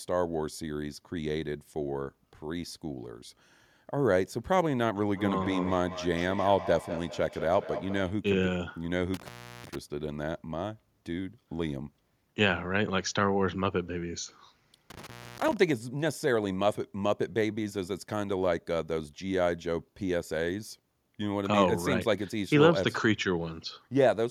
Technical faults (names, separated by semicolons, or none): feedback echo between two devices; intermittent contact